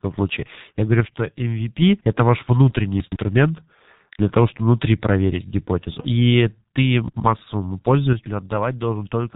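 From the start, the whole recording carries the sound of the G.723.1 codec, heavily damaged: 30 ms frames and a slowly updated voice model leave speech muffled and hoarse, with smeared consonants, which fits roughly 6.3 kbit/s. A spectrogram shows a hard ceiling near 3.8 kHz, nothing above.

At 8.13 s, running to the end, the level drops abruptly by about 6 dB and stays down. That is likely one channel dropping out before the mono sum. The waveform's envelope visibly steps down at that point, and the spectrogram dims uniformly.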